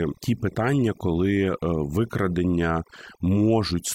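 A speech clip marked throughout by overdone noise removal: the background drops and breaks up into twinkling specks. A noise reducer set too aggressively is switching off individual frequency bands near its noise estimate, taking quieter parts of the voice with them.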